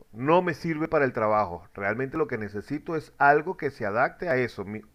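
Dropped buffers (overrun) at 0.85, 2.16, 3.14 and 4.31 s: each is an abrupt forward jump in the speech, as about 20 ms of audio vanishes and its edges butt together, likely because samples weren't read before the hardware overwrote them.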